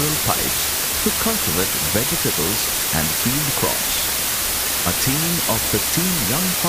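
From start to finish the audio is reduced to a low bit depth with dither, around 3 bits. Noise was added before each rounding step, so the coarse quantisation error becomes a steady, even white hiss instead of distortion, with the hiss about 5 dB louder than the sound itself. A spectrogram shows a flat, uniform noise floor covering every frequency and filling every gap, and the waveform sits inside a thick, fuzzy band that never falls quiet.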